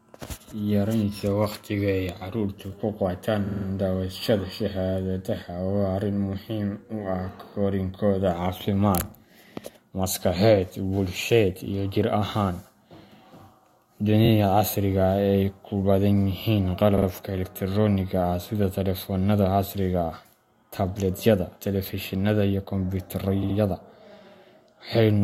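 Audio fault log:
3.46–3.65 s, 14.24–14.29 s, 16.97–17.06 s, 23.42–23.56 s, repeated frames: short blocks of compressed speech, 23 to 70 ms each, were delivered again and replayed two to four extra times, producing a stuttering judder and adding up to 186 ms each, 464 ms in all.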